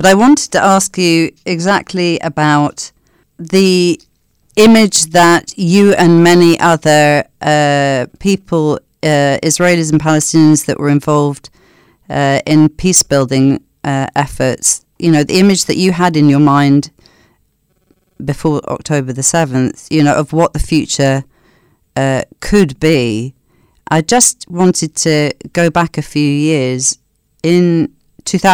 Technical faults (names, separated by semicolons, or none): hard clipping